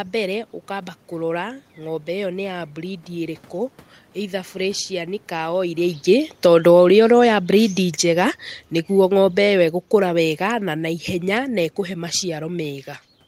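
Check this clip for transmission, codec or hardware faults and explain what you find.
One fault appears twice: automatic gain falling. Just after "either burecianĩ", from 5.42 to 8.48 s, the speech and its room noise sink together by about 6 dB. From 9.13 to 12.32 s they sink again by about 4 dB. Because the background drops along with the speech, this is not the talker moving. The automatic gain control judged the input too loud or its background noise too strong and eased its gain down over roughly three seconds each time.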